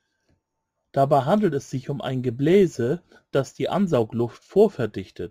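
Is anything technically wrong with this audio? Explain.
Yes. Throughout the speech there is a gritty, inharmonic fizz riding on louder and brighter syllables, roughly 35 dB below the speech. This is crude rate conversion: samples were repeated without filtering, consistent with 44.1 kHz raised to 48 kHz, producing unrelated error tones.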